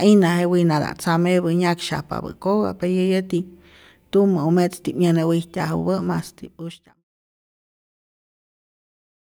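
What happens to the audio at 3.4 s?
Nothing goes wrong at 3.4 s; the speech there is intact, with no dropout, click or distortion.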